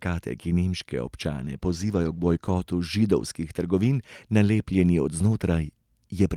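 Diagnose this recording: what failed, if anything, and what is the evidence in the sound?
A call bitrate drop in call processing, from 1.4 to 2.63 s after "ki nemške": the sound turns coarse and muffled, and the spectrogram's upper band thins. This fits encoding falling from 40 to 17 kbps.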